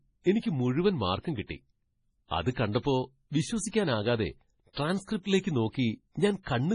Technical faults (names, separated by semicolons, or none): MP3 compression